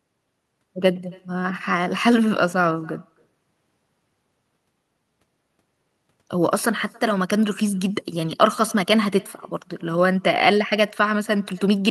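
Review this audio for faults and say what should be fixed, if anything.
Echo with no canceller runs throughout the speech, from start to finish. Each phrase is followed roughly a third of a second later by a faint, thin copy sitting about 28 dB below the direct signal. The far end is playing the call through a loudspeaker, its microphone picks that playback up again, and nothing subtracts it, so the talker's own voice returns after the network round trip. To prevent it, enable acoustic echo cancellation on the far-end device or have that participant use a headset.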